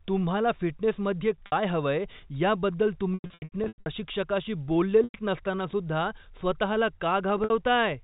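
Packet loss with pitch repetition strikes four times: at 1.46 to 1.52 s and 7.44 to 7.50 s (60 ms each), at 5.04 to 5.14 s (100 ms), and scattered from 3.14 to 3.86 s (480 ms lost, runs up to 100 ms). The receiver repeats the last pitch period to fill each gap, so the speech briefly holds on a buzzy, frozen tone before resuming. In the longer 100 ms gaps, that repetition fades toward silence. The 4 kHz G.711 telephone band remains audible throughout.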